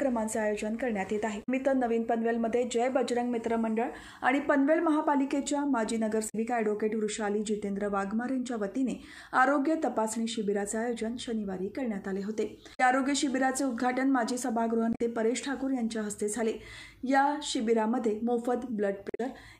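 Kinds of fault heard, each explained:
Damaged data in a compressed stream: Part of the encoded data reaching the decoder is corrupt. The decoder cannot read those frames properly. It loses its place and hunts for the next valid frame start. Each time, a short garbled blip breaks into the sound. This happens five times, at 1.4, 6.26, 12.71, 14.9 and 19.07 s. Each burst lasts about a tenth of a second. The last one runs slightly longer, at about 0.14 s.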